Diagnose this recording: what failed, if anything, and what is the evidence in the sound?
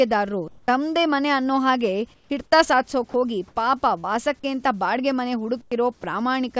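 Call processing: the sender's voice detector likely judged the pauses silent and stopped transmitting, so the receiver synthesised comfort noise in place of the background. At 0.48–0.68, 2.14–2.30, 3.48–3.56 and 5.61–5.71 s the room noise becomes steady and featureless, shifting level by about −3, −4, +2 and −10 dB.

Call processing again: sound dropped by the voice detector, which likely mistook brief low-level sound for background and muted it. At 3.10–3.14 s and 6.01–6.03 s short fragments of sound, about 20 ms and 10 ms, vanish into smooth synthetic noise before the signal resumes.

Network: short concealed packet loss. Around 40 ms of audio failed to arrive in time near 4.00–4.05 s, and the decoder bridged the hole by extending the preceding sound for about 36 ms. The result is a brief smear before the real signal blends back in.

Call processing: an onset clipped by the voice detector, which was likely slow to register that sound had resumed. 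At 5.69–5.71 s, the tail of the deepest comfort-noise patch, the first 20 ms were never sent, so the sound begins abruptly, without its soft attack.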